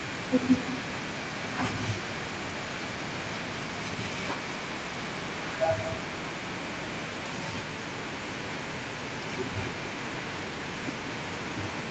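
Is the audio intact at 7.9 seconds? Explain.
No. At 7.9 seconds you're hearing echo with no canceller, and it runs through the whole clip rather than just that moment. The far end is playing the call over a loudspeaker, its mic picks that back up, and nothing strips it out, so the speech returns after roughly a fifth of a second of round trip. The copy sits about 10 dB down and sounds thinner, like a quieter shadow trailing every phrase.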